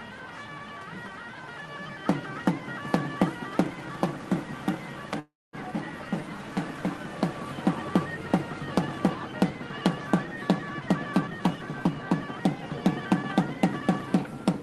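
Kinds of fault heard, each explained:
Call audio freeze: At 5.19 s the sound stops advancing for about 0.37 s, the likely result of packets stalling in transit and the jitter buffer running dry. The receiver extends the last sound into a fading fill lasting about 337 ms, the final 230 ms of which is silent. When the packets arrive, playback resumes exactly where it stopped, so nothing is lost but a 337 ms gap is inserted and the delay grows by that amount.
Jitter buffer speed-up: From 10.74 s to 14.45 s the buffer holds more audio than its target, so the receiver repeatedly cuts out short pitch-period-sized segments to drain the excess. Playback runs at about 109% speed with the pitch unchanged, and the sound comes across as hurried. Over this stretch roughly a third of a second is removed, bringing the delay back down. The Opus-coded call path, band-limited to 12 kHz, carries this passage.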